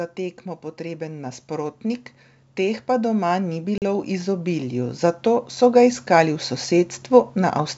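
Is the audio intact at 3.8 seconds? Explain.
No. Between 3.78 and 3.82 s there's packet loss on an ADPCM call: about 40 ms of audio, a couple of packets' worth, drops out and is filled with silence, so you get a hard-edged hole. Worse, the decoder's predictor and step size lost track of the sender's during the gap, so the speech comes back with a bit of distortion, then settles within a few tens of milliseconds.

That hole also sits inside a slow automatic gain rise running from 0.16 to 7.63 s. The gain control decided the input was too quiet and kept nudging its gain up, about 13 dB over the whole stretch. At 3.8 s you're partway up that ramp, so the voice and the background noise are both louder than they were at the start and are still swelling together.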